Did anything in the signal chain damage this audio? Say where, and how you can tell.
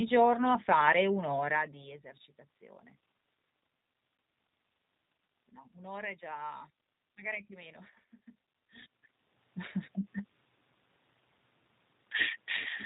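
Yes, at the codec stage, throughout the 13 s of speech. The G.729 codec damage is plainly audible: nothing reaches above 4 kHz, and the voice has a rough, buzzy, synthetic edge because it is rebuilt from a vocal tract filter, a pitch predictor and a few pulses per 10 ms frame, at a rate that fits 8 kbit/s. A plain band limit would sound muffled but smooth. Here the background noise also warbles. The level shifts near 1.5 and 8.5 s come from the talker moving, not from the chain.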